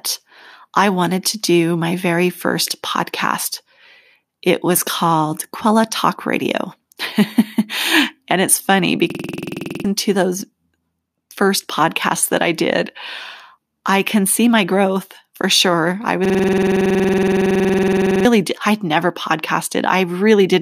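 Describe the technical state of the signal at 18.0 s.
At 18.0 s you're right inside a system hang loop, running from 16.25 to 18.25 s, between "growth for sure I" and "did I'd never". The driver stalled while the hardware kept replaying one 46.4 ms chunk (fits a 2048-sample buffer), giving a 21.5 Hz machine-gun stutter and losing about two seconds.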